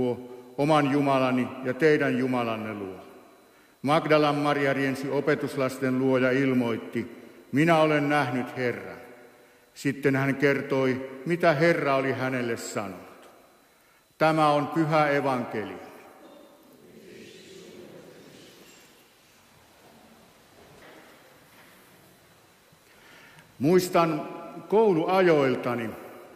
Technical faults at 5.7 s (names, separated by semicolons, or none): none